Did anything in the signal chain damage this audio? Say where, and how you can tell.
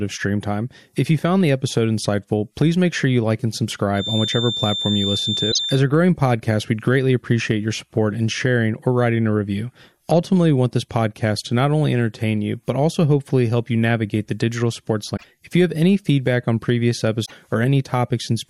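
Yes. From 3.92 to 5.84 s, after "sure you like and" and before "a growing podcast we'd", a thin, steady 3.6 kHz whistle sits a little below the speech and wavers slightly. This is a feedback whistle, likely a loudspeaker-to-microphone loop held just at the point of feedback.

There is also damaged data in a compressed stream at the codec or storage stage. Brief glitches of about 0.1 s occur at 5.49, 15.13 (after "navigate the digital sports") and 17.25 s. Corrupt frames made the decoder lose sync.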